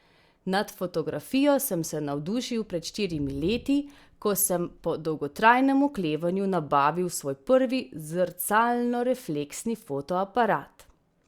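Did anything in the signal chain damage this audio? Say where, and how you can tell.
No, there's nothing here I'd pin on any stage of the chain; the speech comes through without a glitch, dropout or odd sound anywhere that I can hear.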